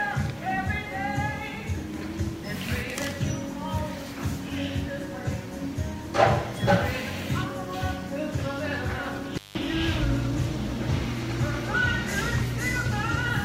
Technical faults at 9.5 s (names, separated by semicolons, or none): intermittent contact